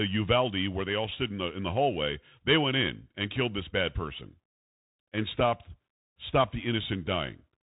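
A speech clip, dull and boxed-in throughout, with nothing above about 3.8 kHz, scratchy s sounds, harshness on loud bright peaks and a granular hiss beneath. This is the Bluetooth CVSD headset codec: each sample is a single up-or-down bit, pointing to a 64 kbps link, and its adaptive step cannot keep pace with fast high-frequency swings.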